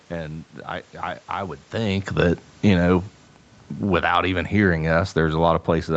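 From 2.08 s, just after "I I I would", the automatic gain control judges the input too loud or its background noise too strong and starts pulling its gain down, continuing to the end of the clip. The speech sinks steadily, with the room noise behind it dropping by the same amount. This distinguishes it from the earlier change in level near 1.5 s, where only the voice shifts as the talker moves.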